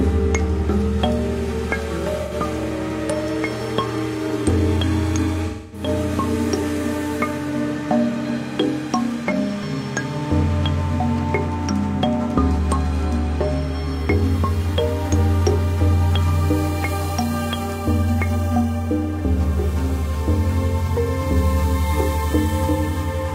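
Brief smeared, noisy patches break the sound at 2.23 to 2.32 s, 5.47 to 5.88 s (the longest, about 256 ms) and 9.32 to 9.37 s. This is AAC frame loss with concealment: frames went missing, and the decoder padded each gap by reusing the last good spectrum.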